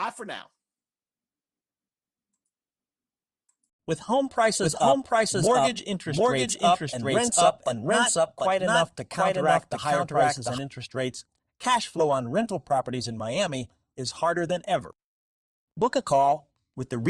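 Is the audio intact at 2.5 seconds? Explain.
Yes, at 2.5 seconds the speech is intact, with no audible fault at that moment.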